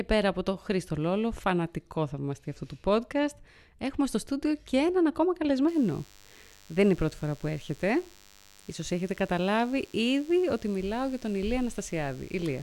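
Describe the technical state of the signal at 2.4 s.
At 2.4 s the speech signal is intact, with no audible dropout, distortion, clipping or other fault at that moment.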